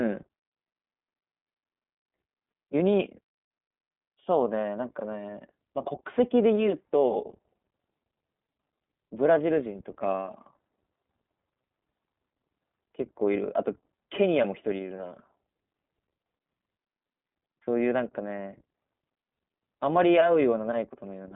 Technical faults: iLBC codec

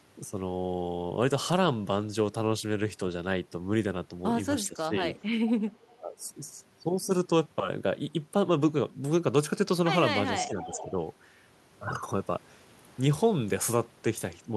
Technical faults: speech suppressed in double talk; echo leak

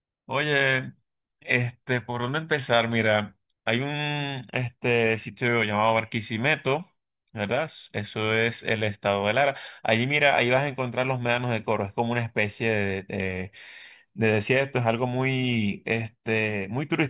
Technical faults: none

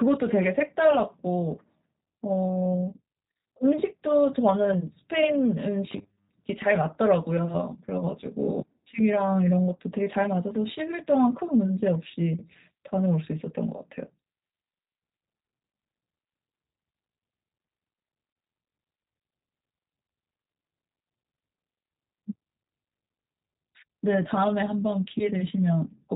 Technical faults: G.729 codec; robotic sound from repeated short buffers

